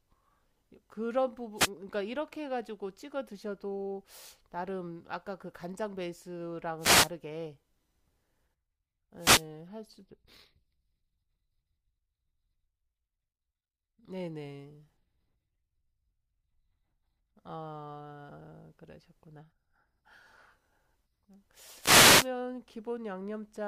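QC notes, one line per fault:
1.56–1.70 s, 6.78–7.11 s, 9.17–9.46 s, 21.78–22.29 s, wireless microphone noise hit: the analogue FM radio link from the microphone fades briefly as reflected signals cancel at the receiver. With the carrier weakened, receiver hiss rises over the speech, heard as a short swish or burst of static lasting between 0.14 s and 0.51 s. The longest is the last, near the end of the clip.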